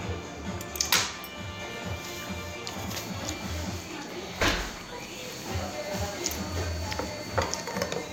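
From about 2.88 s through to the end of the clip there's a feedback whistle, a thin, steady tone at 4.5 kHz sitting about 20 dB below the main sound. It's likely a loudspeaker-to-microphone loop parked right on the edge of feedback: the gain around that path is just high enough to keep one frequency ringing, but not enough to let it build into a full howl. It hangs behind everything, swelling and fading slowly in level.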